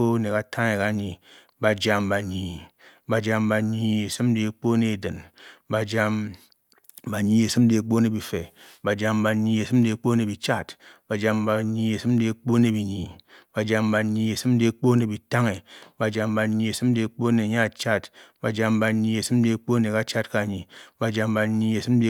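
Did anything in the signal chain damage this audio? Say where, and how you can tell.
No, I can't hear damage from any stage of the chain in this speech recording.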